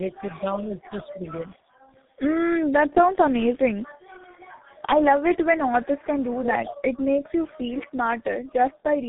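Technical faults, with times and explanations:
Throughout: tandem speech coding. The speech passed through GSM full rate at 13 kbit/s, then G.711 A-law at 64 kbit/s, then G.723.1 at 6.3 kbit/s. The second low-rate speech coder re-encoded the first one's errors, so the speech is rougher and more warbly than one coder would leave it. Nothing above 3.8 kHz remains.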